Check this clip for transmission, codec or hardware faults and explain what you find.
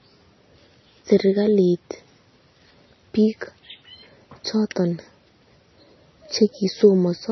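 One codec fault runs through the whole clip: MP3 compression, most likely at a low bitrate. The encoder was starved for bits, so it gave up on the treble entirely and dropped weak frequency lines, which turn on and off from one frame to the next. The damage is heavy. Nothing remains above about 5.9 kHz, a ceiling that fits roughly 24 kbps, so the speech sounds dull and muffled. The flickering lines give it a watery, swirling texture, with metallic chirps on s sounds and smeared consonant attacks.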